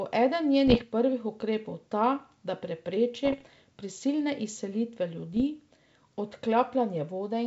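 A speech clip over a G.722 wideband link with bit errors on the ADPCM link: rough, poppy bursts at 0.67–0.83 s (just before "prvih ukrepov ta da"), 3.25–3.47 s and 5.33–5.43 s. Flipped bits knock the decoder's step size and predictor off, so each error rings on briefly with jumpy level.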